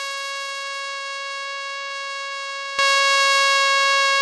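At 2.79 s a sudden gain jump raises the level by about 12 dB and holds it to the end of the music. A gain change was likely applied between adjacent samples with no ramp, so the music and its background noise step up together instantly.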